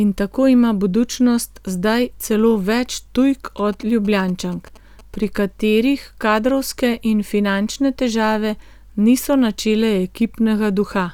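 From 3.58 to 5.25 s there's a burst of GSM signalling interference: a nearby 2G phone handshaking with its network, its radio pulses rectified by the audio circuitry. You get a galloping dit-dit-dit of short 217 Hz buzzes, sitting roughly 25 dB under the speech.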